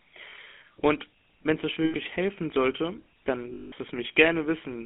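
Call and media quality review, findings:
GSM full-rate codec, whole clip: plainly audible buzzy, gravelly roughness on speech, band confined to 250 Hz–3.4 kHz. Vocal-tract filter driven by regularly spaced pulses, excitation kept at one sample in three. Fits 13 kbps GSM full rate.

Lost GSM frames at 0.30–0.33 s, 1.84–1.95 s and 3.54–3.73 s: speech freezes into a rough, metallic ring. Concealment repeats the last good frame's parameters with attenuation. Lengths fit one, five and nine 20 ms frames.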